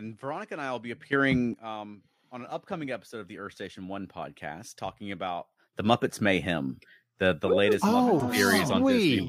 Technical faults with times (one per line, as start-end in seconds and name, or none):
1.13-1.54 sudden gain jump
5.73-9.28 sudden gain jump